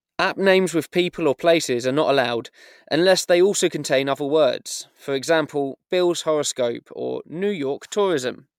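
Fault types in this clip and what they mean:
No technical faults can be heard in this recording. Nothing in the speech calls for a fault description.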